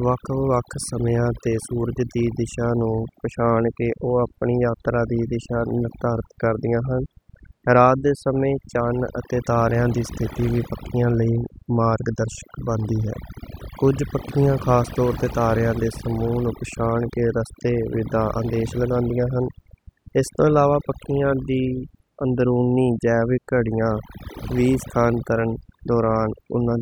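A noise reduction stage was pushed far too hard on this noisy speech recording, producing overdone noise removal that runs through the whole clip. Frequency bands sitting close to the tool's noise estimate are cut deeply or shut off entirely, and the quieter components of the voice are removed along with the noise. Between phrases the background drops and breaks up, dotted with twinkling, chirpy specks.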